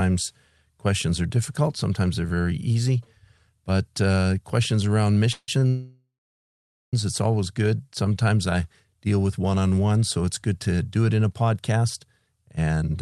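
At 5.32 s the sound hangs on as a fading buzz for 0.16 s, with about 40 ms near silence. This call audio freeze is likely from held-up packets draining the jitter buffer. Playback resumes where it stopped, so nothing is lost. From 5.59 to 5.63 s a sound is held 30 ms too long with a faint dip, a short stall from a late packet that the receiver covered by stretching the last sound. A much longer call audio freeze runs from 5.68 to 6.94 s: a buzz that fades into roughly 0.84 s of silence, likely caused by packets delayed long enough to empty the buffer. The audio then continues intact but 1.25 s later. Between 8.03 and 8.24 s the sound drags at about 85% speed without any pitch change. This jitter buffer slow-down added 39 ms by repeating pitch periods to rebuild a reserve. Throughout, the Opus call path limits the high frequencies to about 12 kHz.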